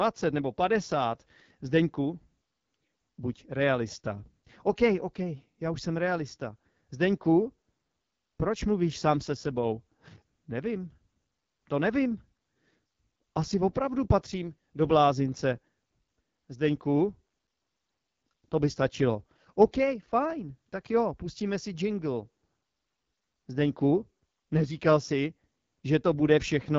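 From start to finish the speech runs through an AMR wideband (HD Voice) codec, and the damage is plainly audible. The texture is rough and raspy, the kind you get when this codec sits down near its bottom bitrates; it sounds like roughly 8.85 kbit/s. There's nothing above about 7.4 kHz, so the top end is dull. The crispness up there is just shaped noise filling in, not real detail.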